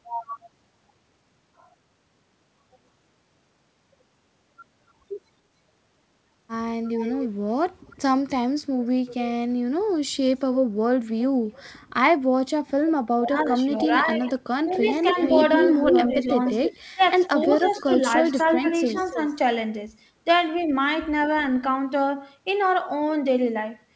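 Speech with echo leak heard five times: 6.83–7.28 s, 7.9–8.3 s, 11.53–11.58 s, 13.79–14.13 s and 14.73–19.34 s. A delayed copy trails the voice by about 0.3 s. It sits about 15 to 30 dB down early on and rises to about 5 dB below the speech late in the clip. The likely cause is a loudspeaker echo that the far end's canceller failed to remove. Between 13.12 and 19.2 s the talker is also pushed down in pieces, for roughly 2 s in total. The deepest drop is about 15 dB. This is speech suppressed in double talk, likely the canceller ducking both voices while the echo overlaps them.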